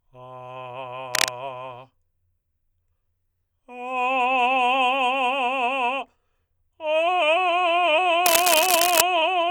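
A music clip with two bursts of cable scratch noise, from 1.14 to 1.29 s and again from 8.26 to 9.01 s, each a dense, ragged crackle roughly as loud as the music itself. The likely cause is a worn cable or connector being moved, its contact resistance jumping rapidly. On a spectrogram each burst shows as an irregular broadband smear; the waveform shows jagged, spiky clusters riding over the music.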